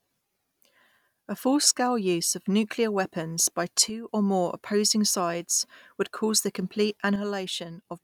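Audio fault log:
3.90–4.09 s and 7.16 s to the end, one channel drops out: the level falls abruptly by about 6 dB, holds there, then snaps back after the first dip. The second dip lasts to the end of the clip. The likely cause is one stereo channel going silent. Sound shared by both channels is then carried by only one, so the mono sum loses half its amplitude. Anything only in that channel vanishes.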